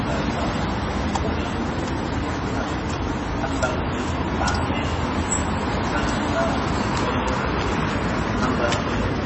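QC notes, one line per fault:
throughout: MP3 compression. The audio stops dead at 8 kHz, with nothing above it, and has a heavy watery, swirling texture as faint detail flickers in and out from frame to frame. The likely cause is bit-starved MP3 encoding, fitting a bitrate around 24 kbps.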